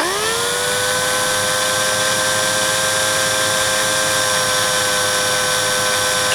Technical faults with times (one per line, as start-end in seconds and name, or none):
2.12 dropped samples
3.17 dropped samples
4.64 dropped samples